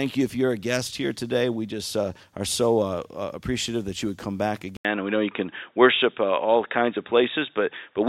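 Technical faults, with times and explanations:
4.77 to 8.09 s, input switched to a poorer device: after a gap of about 80 ms, the speech turns dull and boxy and stays that way to the end, with nothing above 3.8 kHz, a level shift of around 5 dB, and a new faint background noise sitting far below the speech. The likely cause is the recording input changing mid-clip to a narrower-band microphone or a headset's call profile, which brings its own tone, gain and noise floor.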